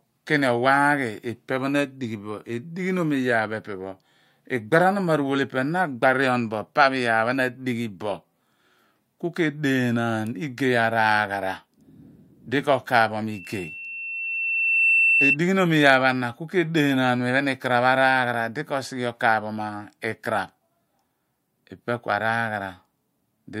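Speech recording with loudspeaker feedback squeal from 13.31 to 15.37 s: a 2.7 kHz tone swells over roughly a second and a half to about 5 dB above the speech, as mic-to-speaker loop gain exceeds unity.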